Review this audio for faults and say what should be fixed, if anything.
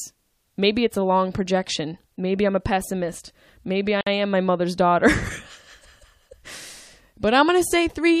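A gap at a join of encoded pieces opens from 4.01 to 4.07 s, a gap of about 56 ms just before "am my mother's daughter". Each piece kept its encoder's leading delay and padded last frame. Unlike a dropout, the sound resumes exactly where it stopped, with smeared edges. Trimming encoder delay and padding before joining would prevent it.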